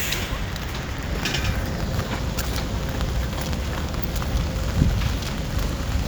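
From 0.55 s to 5.51 s the sound is interrupted by periodic USB or driver dropouts, about seven of them, spaced every 0.99 s. At each one a background task stalls the audio path and roughly 10 ms of audio is skipped outright rather than replaced by silence, so the waveform jumps and a short tick or pop results. The strict regular spacing sets this apart from random network packet loss, whose gaps fall unevenly.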